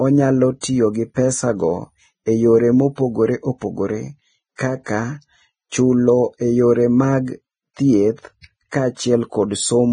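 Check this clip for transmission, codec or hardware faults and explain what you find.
Heavy Vorbis compression runs through the whole speech clip. Nothing sounds above about 9.7 kHz, and the treble is hissy and grainy with blurred consonant attacks. This likely comes from coarse treble quantisation at around 20 kbps.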